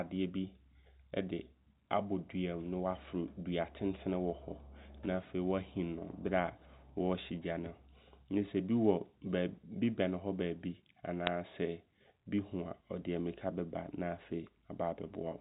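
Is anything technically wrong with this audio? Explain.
Yes. At about 11.27 s there is a sharp, very brief tick, a click sitting on top of speech that otherwise carries on unchanged. These are bit errors on a digital phone line: on this G.711 A-law connection, which limits the audio to below 4 kHz, a few bits were corrupted in transit, roughly one in a thousand. Each flipped bit alters a single 8-bit sample, and a hit on a sign or high-order bit throws that sample far off, producing the click.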